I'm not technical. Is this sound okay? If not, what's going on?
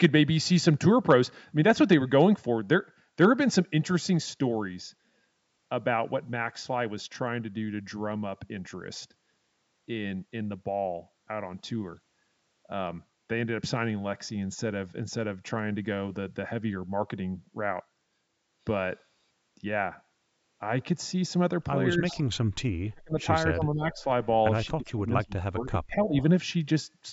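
No, there are two problems near the end of the recording. Speech suppressed in double talk: the voice suddenly dips or partly vanishes at 21.97–22.17, 22.91–23.26, 23.48–24.03 and 24.75–26.15 seconds. Both people were likely talking at once, so the call's echo remover turned everything down, including this voice.

Echo leak: a faint, delayed copy of the voice comes back about a quarter of a second late, at 22.08–22.23, 23.98–24.04 and 26.05–26.23 seconds. The likely cause is a speakerphone whose echo remover missed some of what its microphone heard.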